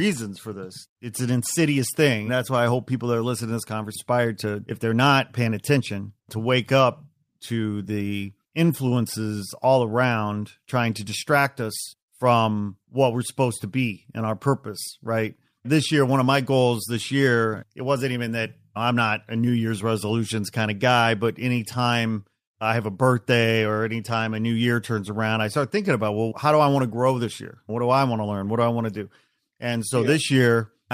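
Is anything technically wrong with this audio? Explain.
Yes, two faults. From 3.95 to 3.97 s, right after "are listening to this", a skip ahead drops roughly 0.7 s of speech, likely discarded by an overflowing jitter buffer, and the two sides are spliced with no gap. From 4.11 to 6.43 s, ending before "up to the influences", a jitter buffer speed-up trims pitch-period slices, about a fifth of a second in total, so speech runs at 110% speed, hurried but unchanged in pitch.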